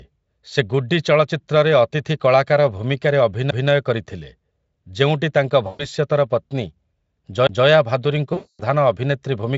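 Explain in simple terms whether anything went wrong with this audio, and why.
Two things went wrong here. First, a CD skip: right after "ଚଳଚ୍ଚିତ୍ରରେ ଅତିଥି କଳାକାର ଭୂମିକାରେ" at 3.51 s, and again at 7.47 to 7.49 s, there's a tiny tick and near-silence of roughly 10 to 20 ms. The playback then lurches to a different spot, as if the laser hopped to another turn of the disc's track.

Second, VoIP packet loss concealed by the speech codec, at 5.67 to 5.87 s just after "ଯେଉଁଟି ତାଙ୍କ", and at 8.33 to 8.63 s. About 120 ms and then 260 ms of audio went missing. The decoder fills each gap by guessing from the last bit it heard, so the sound smears into a buzzy tone or noise that fades, and stays thin for a moment afterwards. The Speex codec carrying all this shows little or no damage of its own.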